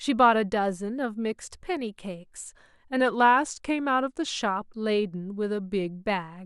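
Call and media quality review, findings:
Drift correction step, 3.01–4.39 s: speech slows about 5.3% and drops nearly a semitone, then snaps back. Likely clock-sync resampler stepping playback rate to refill its buffer.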